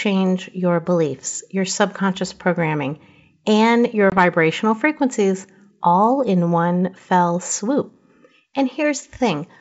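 A speech clip carried over a G.722 wideband call, with one spot of packet loss on the ADPCM call from 4.10 to 4.14 s. There's a sharp-edged 20 ms hole, roughly one packet, filled with silence. The decoder's adaptive predictor and step size drift out of sync with the sender's across that gap, so the speech comes back a bit off before settling within a few tens of milliseconds.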